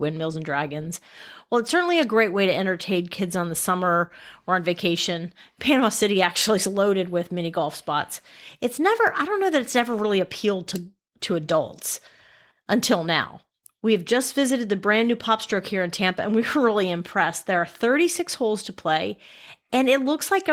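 It's a speech clip, and there's nothing technically wrong to point out here, just the light touch you'd expect from Opus voice compression doing its ordinary job.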